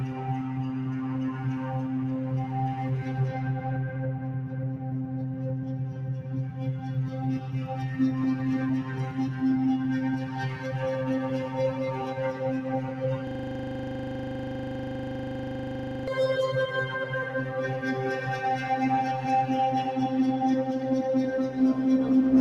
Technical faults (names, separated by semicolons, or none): system hang loop